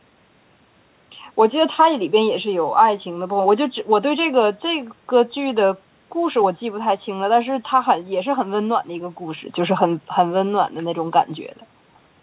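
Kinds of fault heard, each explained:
No faults detected; the speech shows only the expected band limit near 4 kHz from the G.711 mu-law call path and the usual loss of the lowest bass from the call's microphone processing.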